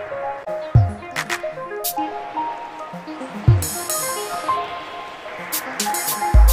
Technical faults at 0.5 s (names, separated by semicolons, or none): damaged data in a compressed stream